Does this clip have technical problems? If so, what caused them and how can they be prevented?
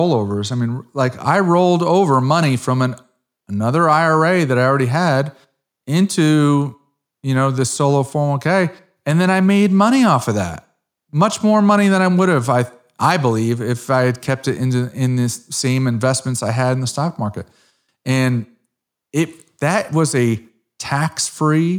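No, the speech signal shows no technical faults at any point, so there is nothing here that needs a cause traced or a fix applied.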